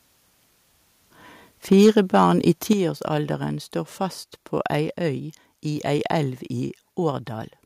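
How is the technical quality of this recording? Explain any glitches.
The recording has clear technical problems: a stretch of distortion on loud speech and two sudden drops in level.

From 1.72 to 2.31 s there is microphone overload, likely from input gain set too high. Peaks run about 4 dB past the converter's ceiling, so their tops are sheared off, giving the loudest syllables a harsh crackle. The waveform shows flattened peaks on a small share of samples, and the spectrogram shows broadband splatter above the speech harmonics.

The microphone volume stepped down twice, at 1.73 s by about 2 dB and at 2.73 s by about 7 dB, likely the call software reacting to the clipping by cutting input gain. Speech and background both drop abruptly, visible as step-down jumps in the waveform envelope and a sudden dimming across the spectrogram.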